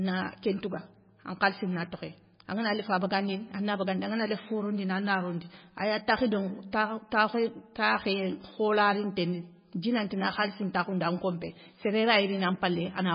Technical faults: MP3 compression

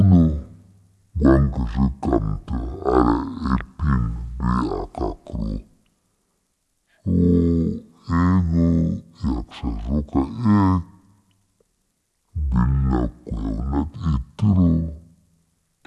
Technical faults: wrong sample rate

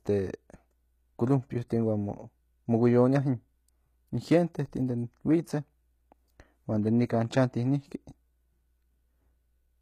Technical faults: HE-AAC compression

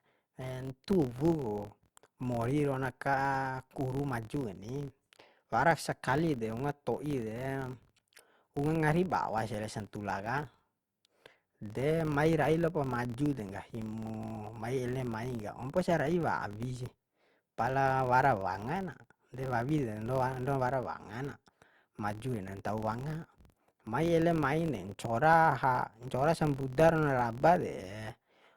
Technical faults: filter restarted on every block

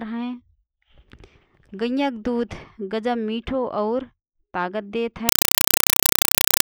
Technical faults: compressed stream played as audio

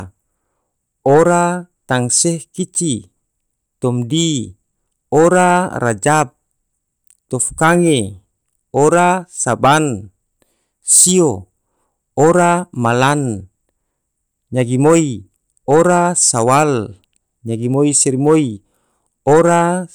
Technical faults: none

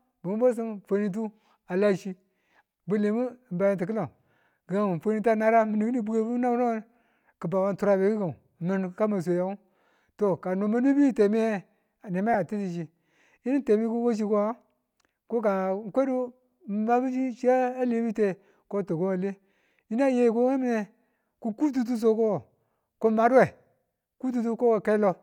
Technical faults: lost LE Audio frames

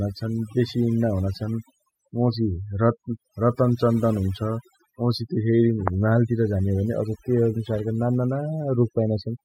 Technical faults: overdone noise removal

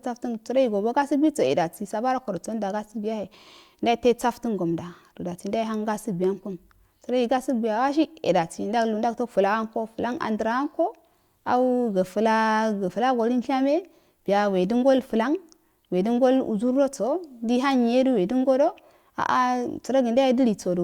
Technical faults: none

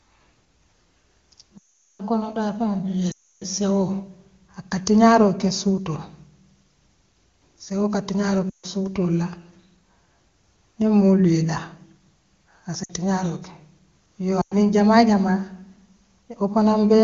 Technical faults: lost AMR speech frames

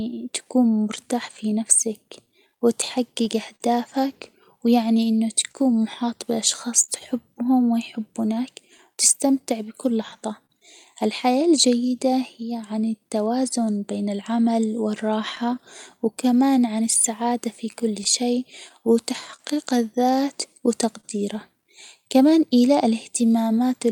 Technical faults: clock drift between sender and receiver; repeated timing corrections; scattered short gaps

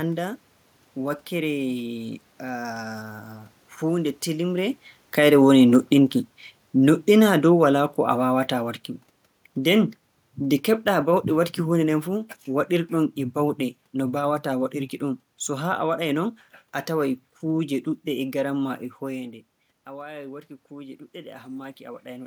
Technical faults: automatic gain falling; automatic gain rising

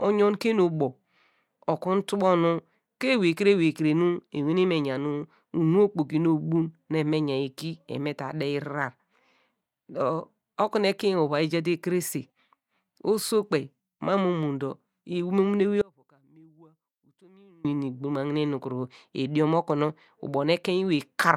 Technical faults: audio dropout to a faint residue

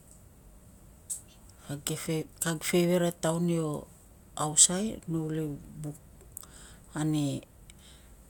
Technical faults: none

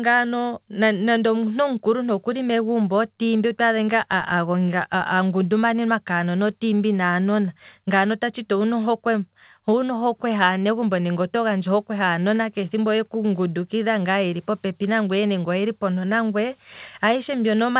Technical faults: none

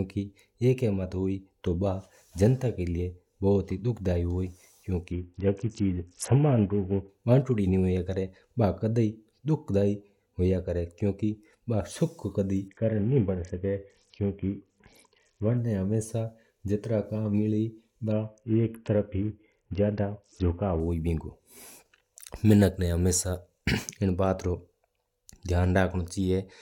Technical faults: Bluetooth SBC bit pool drop

